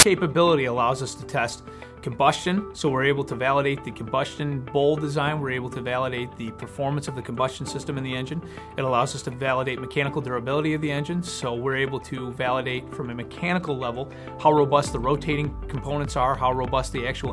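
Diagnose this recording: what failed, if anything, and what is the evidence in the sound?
The failure is at the storage and playback stage: file tags played as audio. The file opens with a hard-edged burst of very loud white noise from 0.00 to 0.03 s. That texture points to compressed data, here an embedded cover picture, being read as samples. The player misjudged where the tag block ended. Compressed bytes are close to random, so they decode as loud static. The burst stops abruptly where the real audio begins.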